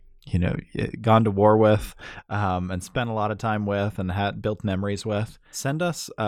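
A digital gain change applied without any ramp, most likely a level setting or bit shift taking effect between one sample and the next, cuts into this speech recording at 2.19 s. From that instant to the end, the voice and the background noise both fall abruptly by about 7 dB together, a sudden gain jump that leaves the remainder noticeably quieter, with no gradual fade between the two levels.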